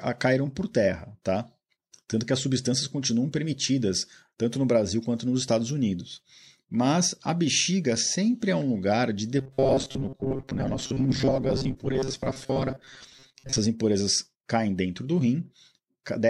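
From 9.39 s to 13.59 s the speech takes on a robotic sound from repeated short buffers: a stiff, metallic buzz at 134 Hz that still loosely tracks the words. The likely cause is audio arriving too slowly, so the playback side keeps looping its last chunk, about 7.5 ms judging by that pitch, while fresh audio gets dropped. Roughly half of what you hear in that stretch is repeated material.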